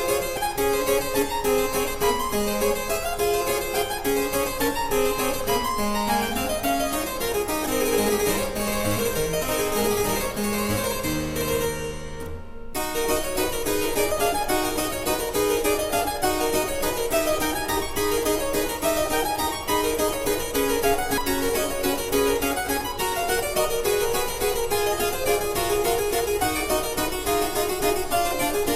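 At 0.37, 7.66, 14.12 and 21.18 s the sound jumps ahead by roughly 50 to 150 ms, likely dropped buffers (overrun), where samples were overwritten before being read.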